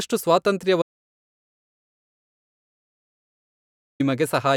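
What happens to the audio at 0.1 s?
At 0.1 s the audio is intact, with no dropout, click, distortion or other fault audible at that moment.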